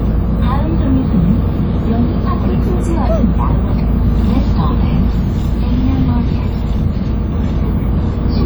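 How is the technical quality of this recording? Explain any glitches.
The recording carries coding damage from start to finish. Across the whole clip the everyday sounds have the smeared, watery texture of a heavily compressed encode, even though the content extends right up to about 20.2 kHz. This is likely low-bitrate audio saved at a high bitrate. The artefacts fit a WMA pass at around 32 kbit/s, later re-encoded as MP3 at 320 kbit/s. The second encode preserves the earlier damage faithfully but cannot restore the detail the first one discarded.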